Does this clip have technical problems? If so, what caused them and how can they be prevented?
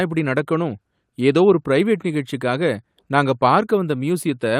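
No, the signal shows no technical faults, so there is no cause to trace and nothing to prevent.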